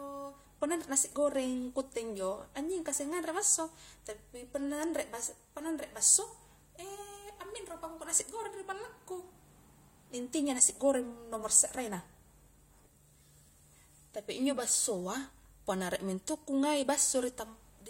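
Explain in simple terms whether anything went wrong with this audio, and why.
Nothing went wrong here: no audible fault anywhere in this speech recording.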